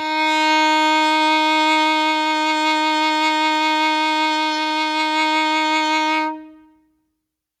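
No technical faults occur in the music, so there is nothing to describe at any point in time.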